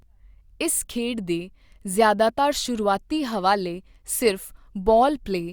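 No technical faults can be heard anywhere in the recording; the speech signal stays continuous and stable throughout.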